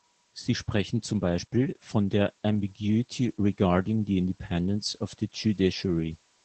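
Throughout this speech clip the voice sounds muffled, slightly hoarse and robotic, with nothing above 8.5 kHz: Opus voice compression in SILK wideband mode, consistent with roughly 12 kb/s.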